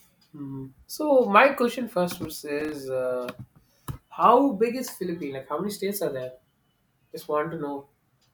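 From 2.15 to 2.72 s, a burst of processor overload crackle tears through the speech. The processor could not finish its small audio buffers on time, and many deadlines slipped in a row. Each miss drops out a few milliseconds as silence, with hard edges on either side. Around fifteen such gaps fall in just over half a second. They blur into a gritty, crackling texture over the voice. It stops once the load eases.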